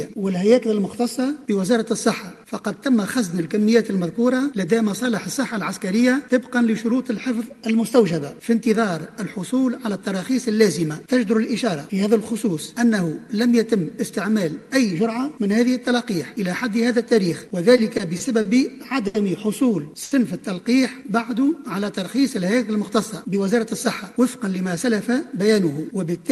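From 17.48 to 18.47 s, repeated stalls (stutter) set in. Packets kept reaching the jitter buffer late, so it ran dry five times, and the receiver extended the preceding sound to cover about 110 ms in all, the longest hold 40 ms. Nothing is lost, but the passage drags and stutters.

Two further short stalls from a late packet follow, at 19.07 to 19.16 s and at 20.04 to 20.13 s. In each, one packet missed its slot and the buffer emptied, so the last sound was held for 70 ms before playback resumed from the same point, leaving a drawn-out moment in the audio.

From 23.22 to 25.48 s comes a jitter buffer speed-up. With more audio queued than its target, the receiver trimmed out brief pitch-period slices repeatedly, roughly 150 ms in total. Playback runs at 105% speed at unchanged pitch, so this stretch sounds hurried. Through all of this the audio carries Opus coding noise, with the top end stopping near 12 kHz.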